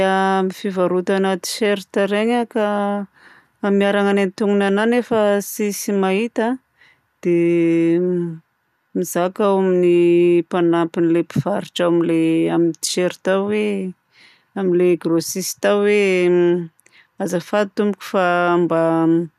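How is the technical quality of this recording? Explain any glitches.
No technical faults are audible.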